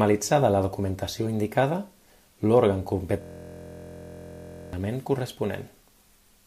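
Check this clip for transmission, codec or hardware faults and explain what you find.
One hardware fault is present. From 3.22 to 4.73 s, a system hang loop repeats a 23.22 ms fragment, which fits a 1024-sample buffer, producing a steady 43.1 Hz buzz. The waveform shows identical repeating blocks, and the spectrogram shows evenly spaced horizontal harmonic lines.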